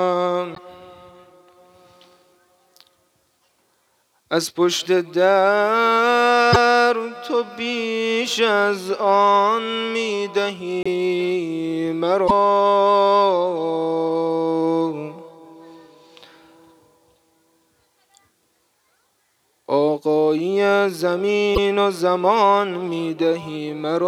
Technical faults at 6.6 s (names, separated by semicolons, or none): broken MP3 bit reservoir